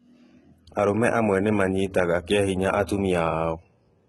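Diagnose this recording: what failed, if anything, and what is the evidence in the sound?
The codec stage is at fault, with heavy damage through the whole clip and nothing above 11.8 kHz. The likely cause is HE-AAC compression at a very low rate, consistent with about 16 kbps. A simple low-pass or narrowband codec would leave the top dull and empty. Here the treble is synthetic: spectral band replication copies lower bands upward, so harmonics misalign above the crossover and sibilants sound gritty, metallic and lispy rather than merely muffled.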